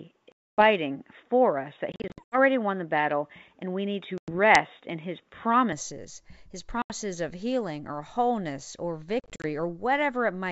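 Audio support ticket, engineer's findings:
Input switched to a poorer device, 0.00–5.73 s: band-limited, nothing above 3.8 kHz, level about 5 dB off, faint extra noise floor, no gap at the change back. Likely a mic or headset call-profile switch at the input.

Packet loss on an ADPCM call: hard-edged holes at 0.32–0.63 s (260 ms), 1.92–2.37 s (240 ms scattered, longest run 80 ms), 4.18–4.37 s (100 ms), 6.82–6.92 s (80 ms, before "of healing or wholeness"), 9.20–9.45 s (140 ms scattered, after "healing or wholeness or"). The decoder predictor and step size desync, so audio returns slightly distorted, settling within tens of ms. G.722 64 kbit/s path shows faint coding hiss.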